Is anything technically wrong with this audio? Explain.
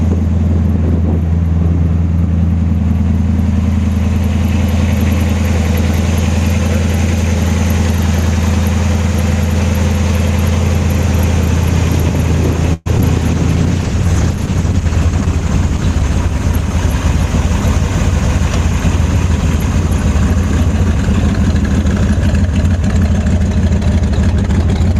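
Yes. From 12.73 to 12.88 s the sound stalls into a fading buzz for about 120 ms, then resumes intact: a call audio freeze, likely from delayed packets draining the jitter buffer.

At 12.98 to 13.01 s and 13.01 to 13.03 s, two brief smears mark short concealed packet loss, where missing audio was patched by extrapolating the preceding sound.

From 13.20 to 18.57 s the audio turns rough and muffled. This is a call bitrate drop from 48 to 13 kbps, bottoming out for about 2.6 s.

From 20.51 to 21.63 s the sound runs slightly hurried at unchanged pitch. A jitter buffer speed-up trimmed pitch periods to play at 105%, shedding roughly 70 ms.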